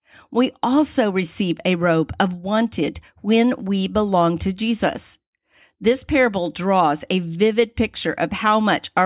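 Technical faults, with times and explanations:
No technical faults can be heard anywhere in this speech recording.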